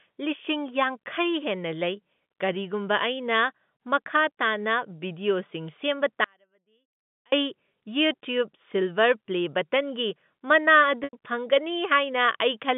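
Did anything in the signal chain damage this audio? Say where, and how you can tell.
Yes. From 6.24 to 7.32 s, an audio dropout to a faint residue removes about 1.08 s of speech. The cause is likely a break in analogue wiring with the later path still live. The waveform collapses abruptly to a thin trace about 40 dB down, with sharp vertical edges in the spectrogram.

From 11.04 to 11.13 s, network packet loss with pitch repetition conceals a 90 ms gap, which fits three lost packets. The receiver repeated the last pitch period, giving a brief buzzy hold. The spectrogram shows frozen, flat harmonics, and the waveform shows identical cycles decaying.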